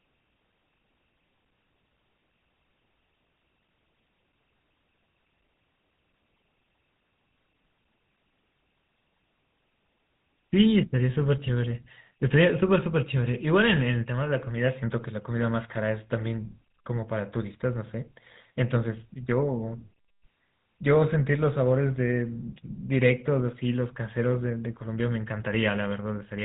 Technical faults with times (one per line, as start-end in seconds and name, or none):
0.00-26.44 GSM full-rate codec